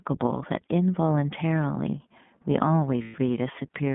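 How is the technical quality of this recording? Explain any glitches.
The recording is narrowband speech with audible codec damage throughout and one brief dropout near the end.

iLBC codec: the speech passed through a low-rate VoIP coder, which fits iLBC at about 15 kbps with 20 ms frames. The line carries only about 150 Hz to 3.5 kHz, so the voice sounds muffled and thin, with a plainly audible rough, slightly synthetic edge.

Lost iLBC frames: from 3.02 to 3.16 s, about 120 ms of packets never arrived. The decoder filled the gap by repeating the last pitch cycle mixed with noise, heard as a held, faintly buzzy vowel. Normal speech resumes almost immediately afterwards.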